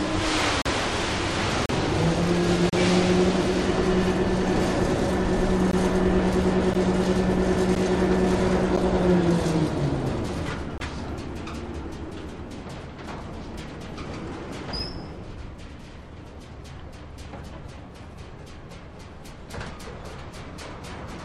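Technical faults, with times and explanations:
0.62–0.66, 1.66–1.69, 2.70–2.73, 5.71–5.73, 6.74, 7.75, 8.77 and 10.78–10.80 s, gap between stream segments: segment timestamps don't meet, consistent with one-second segments, so the player inserts silence, leaving hard-edged holes of about 9 to 38 ms.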